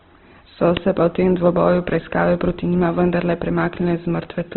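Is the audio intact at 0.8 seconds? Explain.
No. Just before it, at about 0.77 s, an uninitialised buffer plays a roughly 5 ms burst of loud digital noise, which fits a 256-sample block read from memory before any audio was written. Unlike a dropout, which leaves a silent gap, this fault adds a harsh burst of noise.

The speech there also carries heavy, grainy codec damage with nothing above 4.2 kHz. This is likely Opus compression at a low rate near 12 kbps, filling starved bands with noise. It sounds rough and grainy, not the swirling of MP3.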